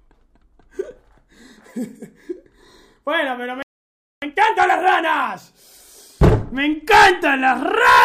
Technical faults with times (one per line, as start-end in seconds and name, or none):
3.62-4.22 playback stall
4.22-5.40 time-compressed catch-up